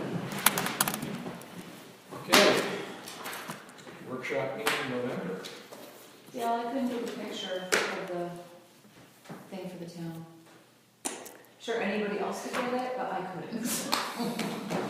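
No technical faults can be heard anywhere here.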